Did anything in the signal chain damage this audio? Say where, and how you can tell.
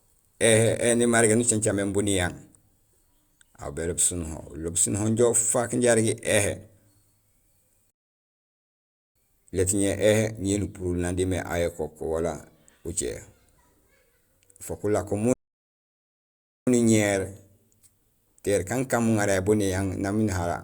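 Yes, at the playback stage. The speech cuts out abruptly twice, each time in mid-flow: from 7.90 to 9.16 s, a gap of about 1.25 s, and again from 15.33 to 16.67 s, roughly 1.34 s, right after "fook ulako". Those dead silences are a playback stall. The likely cause is the player starving for data or having its output thread blocked, so nothing reached the output until it caught up.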